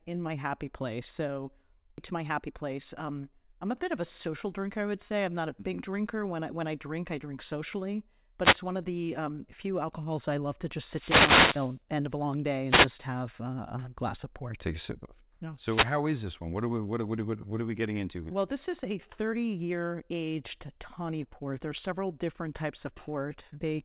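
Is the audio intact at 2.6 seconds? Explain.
No. Between 2.13 and 3.05 s a jitter buffer speed-up is active. With more audio queued than its target, the receiver repeatedly dropped pitch-period-sized slices, about a tenth of a second in all. The speech runs at 109% speed with unchanged pitch and sounds hurried.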